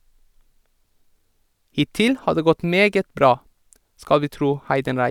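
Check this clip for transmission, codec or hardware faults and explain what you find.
No technical faults turn up anywhere in this speech recording, and the signal stays continuous and intact throughout.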